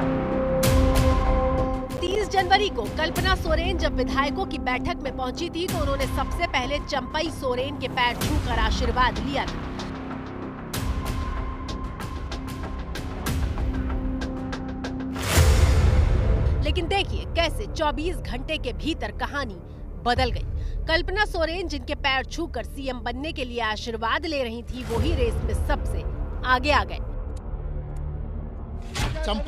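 Right around 1.97 s there's a burst of processor overload crackle lasting until about 2.16 s. The machine couldn't fill its audio buffers in time, so several drop out as short silent gaps, which fits buffers of around 10 ms. That stutter of hard-edged holes reads as gritty tearing.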